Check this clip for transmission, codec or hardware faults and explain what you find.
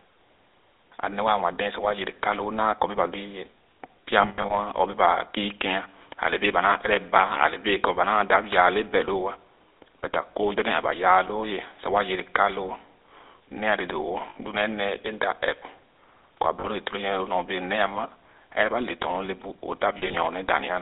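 Yes, there are two problems: the whole clip has been through a GSM full-rate codec, and there are four short bursts of lost GSM frames on top of that.

The GSM full-rate codec damage runs the entire length and is plainly audible. The speech sits in a narrow phone band, roughly 300 Hz to 3.7 kHz, and has that buzzy, gravelly edge you get when the coder rebuilds the voice from a vocal-tract model fed by a coarse, regularly spaced pulse train. The character fits the old 13 kbps full-rate coder.

Lost GSM frames show up four times: 4.22 to 4.55 s, 14.30 to 14.37 s, 16.60 to 16.68 s, and 19.98 to 20.16 s. Each time the decoder papers over the gap by reusing the last good frame's settings, so the sound smears into a brief metallic, rough ring instead of cutting out. The first and last bursts are scattered, with the longest stretch in the first only about a tenth of a second.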